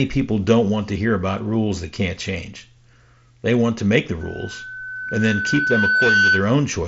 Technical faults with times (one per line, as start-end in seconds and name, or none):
4.21-6.57 loudspeaker feedback squeal